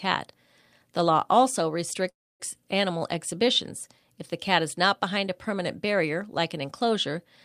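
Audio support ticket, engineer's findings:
Call audio freeze, 2.09–2.42 s: speech stops, brief fading buzz, then about 270 ms silence. Likely jitter buffer underrun from delayed packets. Unlike packet loss, speech resumes exactly where it halted, nothing missing; everything after runs about 305 ms late.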